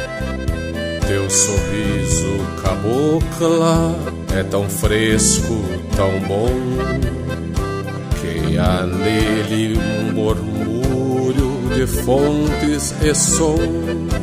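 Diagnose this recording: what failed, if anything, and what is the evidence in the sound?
Nothing in the recording points to a failure at any stage of the chain. No event in the sound stands out as evidence of a fault.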